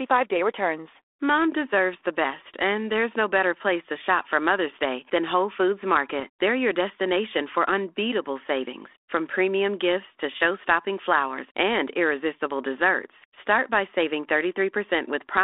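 At 6.19 to 6.24 s the speech gives a short pop and a rough burst with a brief change in level. These are bit errors on an ADPCM link: flipped bits on the 32 kbit/s G.726 path upset the decoder's step size and predictor, so each error rings on briefly.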